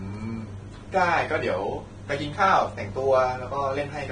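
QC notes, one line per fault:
Throughout, Vorbis compression: the speech sounds hissy and grainy, with a rough, smeared texture and blurred consonant onsets, and nothing at all above 9.7 kHz. This is likely heavy low-bitrate Vorbis encoding, roughly consistent with a rate near 23 kbps. Such an encoder sets a low cut-off and quantises the upper band so coarsely that fine treble detail is replaced by noise of similar energy, which gives the fizzy roughness heard here.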